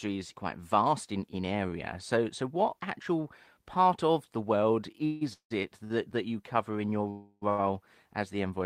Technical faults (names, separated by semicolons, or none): call audio freeze; short stall from a late packet